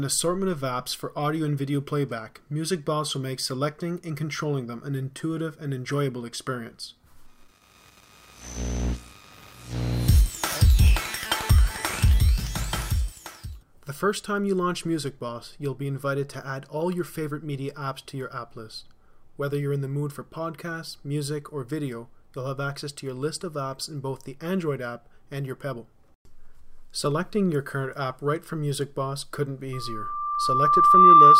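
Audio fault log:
29.73–31.40 s, loudspeaker feedback squeal: a steady 1.2 kHz tone swells over roughly a second and a half until it sits well above the sound, around 15 dB louder, because the microphone is re-amplifying its own loudspeaker and that frequency's loop gain exceeds unity.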